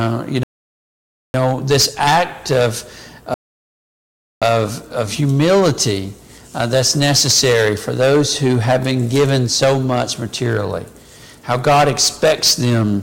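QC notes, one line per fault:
0.43–1.34 s and 3.34–4.42 s, rebuffering stall: the player drained its buffer of downloaded audio and halted until more data came in, so the sound drops to silence for about 0.91 s and then 1.08 s and picks up exactly where it stopped, adding time without losing any audio.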